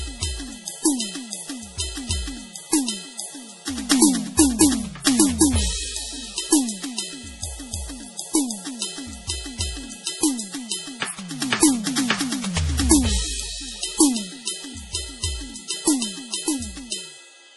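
From start to finish the music is band-limited, with nothing above 11.5 kHz, and heavy, watery, swirling damage, likely MP3 compression at a very low bitrate, which fits roughly 32 kbps. Unlike a plain low-pass filter, weak frequency lines flicker on and off between frames.

At 3.89 to 3.91 s a sharp attack is preceded by about 21 ms of hiss: pre-echo, where quantisation noise sized for the loud onset spreads through the whole transform block. Unlike reverb or a click, it arrives before the hit.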